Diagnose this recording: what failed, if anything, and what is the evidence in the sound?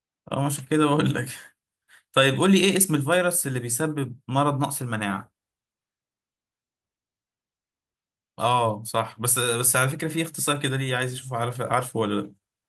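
The fault lies in clock drift between sender and receiver, at the network jitter buffer. The sender's clock runs roughly one and a half percent slow, so packets arrive a little behind the rate the receiver plays them out and the buffer keeps sliding toward empty. Unlike a single dropout, the unsteadiness is spread through the whole speech clip rather than clustered at one moment.

The receiver answers with repeated timing corrections from 0.06 s to 12.41 s, stretching the material so it plays at about 99% speed. Short pieces are repeated at uneven intervals, always in the same direction, adding roughly a fifth of a second over the span. These are heard, if at all, as faint hiccups and a slightly dragging, uneven tempo. Because the edits only ever lengthen the speech and never shorten it, this is steady drift compensation, not random jitter.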